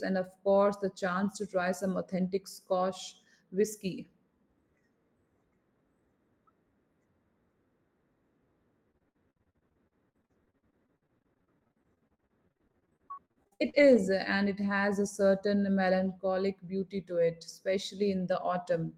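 From 8.91 to 13.97 s, repeated packet loss gives a robotic sound. Dozens of short holes occur, the longest 60 ms. Each is patched by repeating the last sound, concealing about 30% of the stretch. The result is choppy, with pieces missing. It ends before "and it has a".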